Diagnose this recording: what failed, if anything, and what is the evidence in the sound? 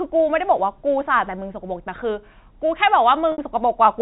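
Packet loss with pitch repetition, from 3.32 to 3.38 s, at the network stage. About 60 ms of speech goes missing. The receiver bridges it by replaying the last pitch period, so the gap comes out as a briefly held, buzzy tone fading down rather than a clean dropout. The speech then returns through a short cross-fade. The length fits several consecutive lost 10 ms packets on the G.711 A-law telephone stream, whose narrowband coding is working normally here.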